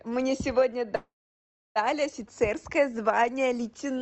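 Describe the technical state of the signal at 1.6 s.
At 1.6 s the speech sits inside a call audio freeze, from 0.95 to 1.78 s. Delayed packets likely emptied the jitter buffer. A short fading fill gives way to silence. Speech then resumes unclipped.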